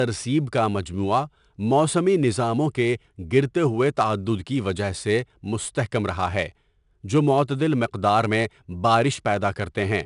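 Throughout the speech, 4-bit ADPCM compression is plainly audible. Each sample is stored as a coarse step from a prediction. The error becomes a gritty hiss that rises with every loud syllable. Nothing sounds above 10.6 kHz, which fits about 89 kbps.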